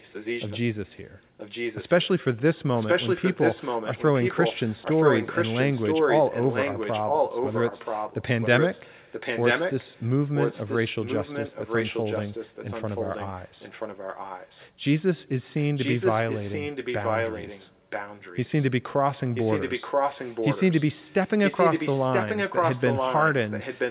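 Echo leak runs through the speech at 0.0–0.6, 1.37–2.08, 2.75–10.08, 10.34–14.69, 15.58–18.71, 19.34–20.88 and 21.06–23.9 s: a distinct repeat trailing by 980 ms, roughly level with the speech or up to about 10 dB below. Unlike reverberation's smeared tail, it is a discrete copy, likely from a loudspeaker's echo canceller letting pickup through.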